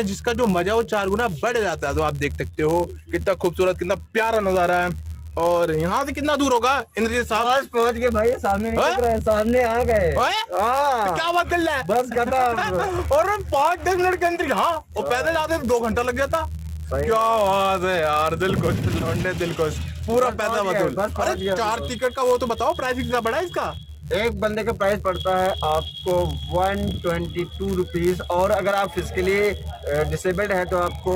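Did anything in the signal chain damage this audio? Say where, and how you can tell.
Yes: a block size mismatch (padded) at the driver or buffer stage zero-fills each block's tail throughout, giving a 91.5 Hz buzz and playback slowed to 0.996x speed.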